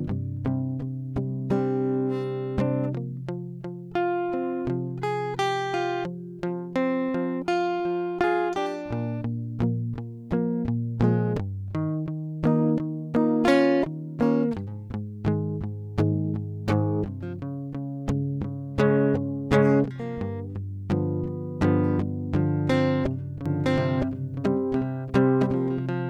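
At 23.46 s a doubled audio track begins and runs to the end: a second, full-band copy of the music, about as loud, trails roughly a second behind, likely from a slower second capture path. It enters abruptly with no decay, and the spectrogram shows every pattern repeated, shifted sideways.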